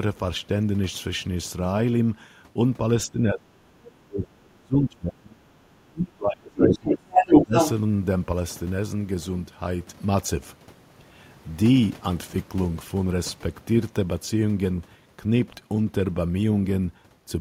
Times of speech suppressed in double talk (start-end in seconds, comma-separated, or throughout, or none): 3.06-3.66, 4.06-5.41, 5.87-7.53